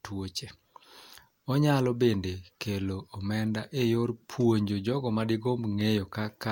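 No technical faults occur anywhere in the speech, so there is nothing to describe in time order.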